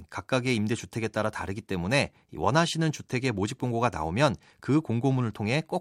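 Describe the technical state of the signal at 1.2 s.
At 1.2 s the speech signal is intact, with no audible technical fault at that moment.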